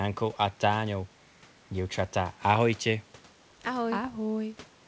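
No technical faults can be heard in this speech clip.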